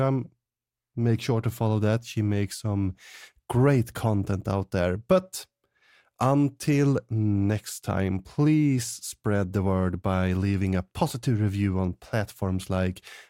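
No technical faults can be heard anywhere in the speech recording, and the signal stays steady and intact throughout.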